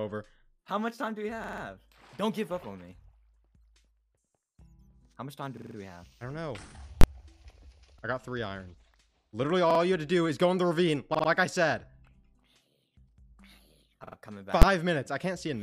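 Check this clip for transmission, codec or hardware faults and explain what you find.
Two faults appear: repeated buffers at six points and two full-scale bursts from invalid numbers.

Repeated buffer at 1.44–1.63 s, 5.57–5.76 s, 7.99–8.03 s, 9.71–9.80 s, 11.15–11.29 s and 14.07–14.16 s: fresh audio arrived late, so playback looped the previous chunk. Each segment of about 46 ms, which fits a 2048-sample buffer, repeats up to four extra times with hard joins, producing a stuttering judder.

Invalid numbers at full scale at 7.01–7.04 s and 14.62 s: a processing step produced invalid values that were pinned to maximum amplitude for a whole block, about 23 ms and 12 ms, which fits 1024- and 512-sample blocks. Each burst is too brief for a gap to be heard and comes across as a single loud bang.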